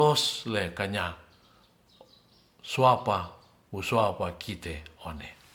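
Speech with generation loss running through the whole clip. The sound is swirly and hollow, with smeared consonant attacks and a grainy, shifting noise floor, more damage than a single encode near 130 kbit/s would leave. Content stops at about 19.9 kHz. This likely comes from repeated MP3 decoding and re-encoding, around seven passes, each one quantising on a fresh frame grid so that noise and spectral holes accumulate.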